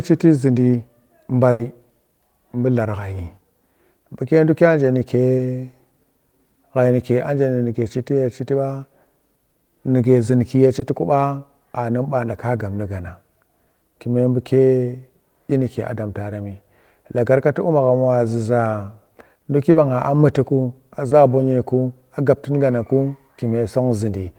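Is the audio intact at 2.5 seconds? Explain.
Yes, at 2.5 seconds the speech plays through intact, with no dropout, click, distortion or other technical fault at that moment.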